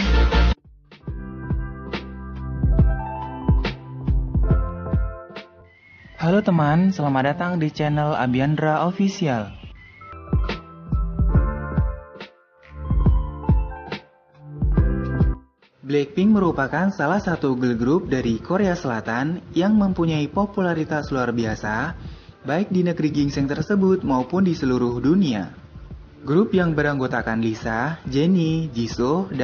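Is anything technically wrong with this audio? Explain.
Yes. From about 0.1 s to 29.33 s the audio carries clock slip clicks: faint, evenly spaced ticks roughly five times a second, well over a hundred in all. The likely cause is two devices running on unsynchronised clocks that differ by something like 100 parts per million, so a single sample is dropped or repeated each time the drift reaches a full sample. Unlike random dropout glitches, these ticks keep a steady rhythm and are most audible on loud, sustained passages.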